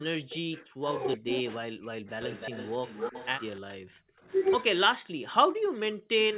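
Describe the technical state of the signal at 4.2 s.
At 4.2 s the speech sinks sharply, falling by roughly 35 dB at its deepest between 4.01 and 4.27 s, with the level pulled down against a band that already stops near 4 kHz. This is speech suppressed in double talk. The likely cause is that both ends were talking at once, and the echo canceller, unable to tell this talker apart from the returning loudspeaker echo, attenuated both.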